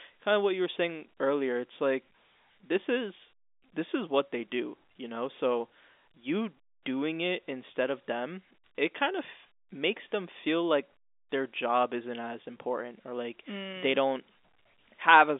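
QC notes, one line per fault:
No faults found; the speech occupies a telephone band of about 250 Hz to 3.6 kHz, consistent with G.711 A-law coding at 64 kbps.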